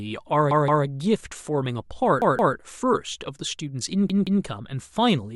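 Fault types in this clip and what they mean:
repeated buffer: Fresh audio arrived late, so the device replayed its last block. A 0.17 s segment, consistent with an 8192-sample buffer, sounds two extra times with hard joins, a stutter near 0.51, 2.22 and 4.10 s, apparently skipping nothing.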